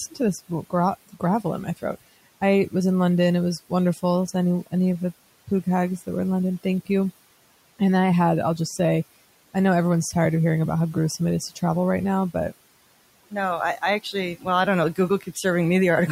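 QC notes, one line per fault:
1.07–1.23 s, speech cut by the noise suppressor: the suppressor mistook a quiet stretch of speech for background and pulled its gain down along with the room noise, which sits about 22 dB below the speech. The level drops by as much as about 18 dB for roughly a tenth of a second. The sound just before "in my throat I" comes across faint and swallowed, as if sinking briefly into the noise floor.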